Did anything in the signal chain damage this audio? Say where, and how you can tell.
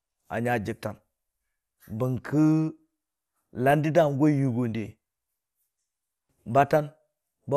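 Yes. MP2 compression at the codec stage affects the whole clip. The speech sounds dull and granular, with nothing above 15 kHz, likely because bit-starved Layer II sub-bands were switched off, which fits an 80 kbps rate.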